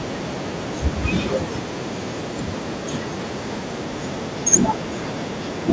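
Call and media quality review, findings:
No faults; call mic processing normal, 8 kHz bandwidth.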